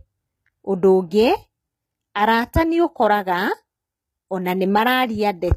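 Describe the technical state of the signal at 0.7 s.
HE-AAC compression is audible at 0.7 s and throughout the speech, likely from a very low bitrate near 20 kbps: the treble is rebuilt by copying lower bands upward, so sibilants sound gritty and metallic, with nothing above 14.8 kHz.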